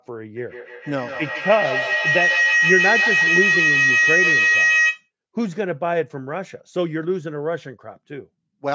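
Feedback howl runs from 0.36 s to 5.1 s. Two devices on the same call are sharing a room, so sound from the loudspeaker re-enters the microphone and comes back louder on each pass. The repeats build rather than decay and narrow to a tone near 2 kHz, with the loop repeating about every 150 ms, and the howl peaks about 4 dB above the speech. The call's microphone processing, which passes nothing above 8 kHz, leaves that tone fully audible.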